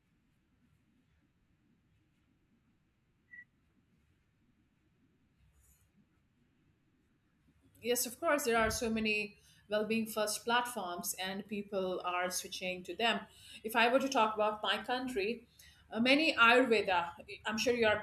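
No technical faults are audible anywhere in the speech recording.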